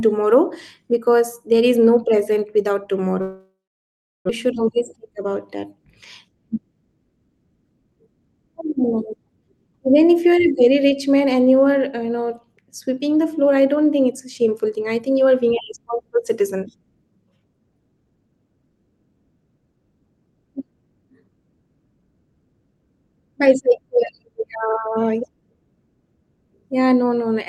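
At 3.21 s, right after "is no present without", a long network dropout is the likely cause of what follows. The last sound smears into a fading buzz or hiss, then silence until 4.39 s. On a spectrogram this shows as a blurred tail and then an empty band. The waveform runs flat.

From 4.90 to 5.24 s a jitter buffer speed-up trims about 50 ms of pitch-period slices, playing the speech about 11% faster at unchanged pitch. It sounds briefly hurried.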